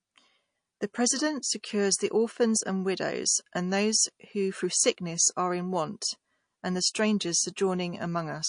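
Throughout the speech the sibilants carry a watery, swirling texture, with metallic chirps on s sounds and softened consonant attacks. These are the marks of MP3 compression, likely at a low bitrate around 40 kbps. Starved of bits, the encoder drops quieter frequency components, which then flicker in and out between frames. The damage is plainly audible across the full clip.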